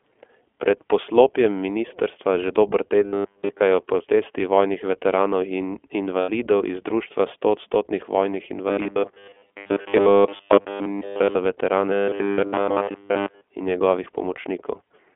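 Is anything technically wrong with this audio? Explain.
Yes. The iLBC codec runs throughout this speech: the audio is confined to about 250 Hz to 3.4 kHz and, with each 20 ms frame coded independently, sounds plainly rough and synthetic, which fits the 15.2 kbps mode.

Robotic sound from repeated short buffers appears at 3.06 to 3.61 s, 8.68 to 11.35 s and 11.92 to 13.43 s. A 10 ms buffer replayed in place of late audio imposes a rigid, metallic 100 Hz buzz. In the first two spans it replaces most of the sound, and in the last it replaces all of it. A buffer underrun is the likely cause.

Lost iLBC frames occur at 6.20 to 6.30 s (80 ms), 9.58 to 9.68 s (80 ms) and 12.34 to 12.40 s (60 ms). The decoder repeats the last pitch cycle mixed with noise, producing a brief held, buzzy vowel. The voice recovers almost immediately afterwards.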